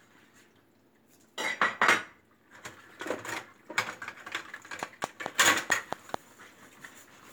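From 4.83 to 6.15 s, a train of clicks ticks over the sound at a regular 4.6 per second, about seven sharp pops. They stand out strongly, likely from nearby equipment interference.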